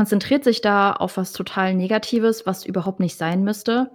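A scratch overwhelms the disc's error correction once per revolution, so the player patches the damage: six CD scratch ticks, the longest about two milliseconds, from 2.16 to 3.32 s.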